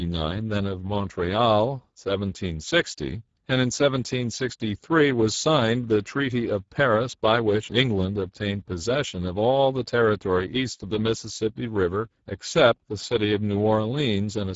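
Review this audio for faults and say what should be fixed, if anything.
The Speex codec damage runs through the whole clip. The speech sounds hoarse and noisy, and nothing is heard above 7.7 kHz. The damage fits a bitrate near 10 kbps. At that rate the CELP coder has too few bits for the excitation. The band above 4 kHz is only a noise-like fill. To prevent this, encode at a higher Speex quality or use a modern codec such as Opus.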